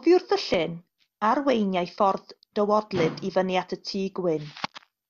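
No faults can be heard anywhere in the recording, and the signal comes through intact with nothing in its path introducing any audible disturbance.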